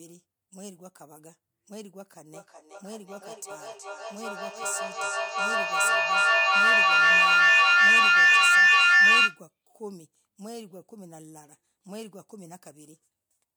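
A speech recording with a feedback howl from 2.33 to 9.47 s. A loop between microphone and loudspeaker gains level on each pass. It narrows to a tone around 2 kHz. It pulses roughly every 0.4 s and peaks about 20 dB above the speech.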